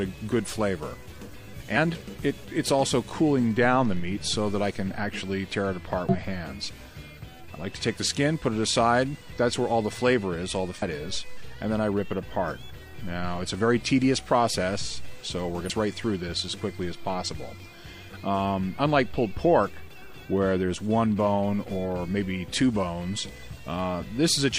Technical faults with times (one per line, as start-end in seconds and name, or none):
6.09-6.15 damaged data in a compressed stream
10.78-10.83 damaged data in a compressed stream
15.65-15.71 damaged data in a compressed stream